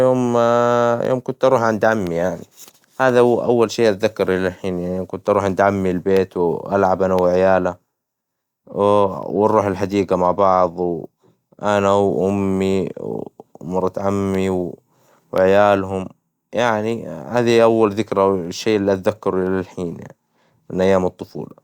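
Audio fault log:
1.05 to 21.51 s: periodic USB or driver dropouts. About twenty tiny gaps break the speech, one every 1.02 s. Each gap is a small fraction of a millisecond, and the lost samples are replaced by silence. Something on the USB bus or in the audio driver stalls the stream at this fixed interval. Each sudden drop to silence and back makes a click. The result is a steady ticking, heard only while the speech carries signal.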